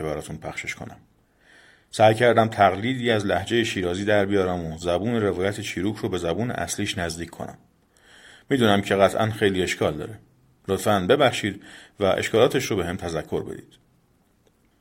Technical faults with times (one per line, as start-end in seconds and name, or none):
none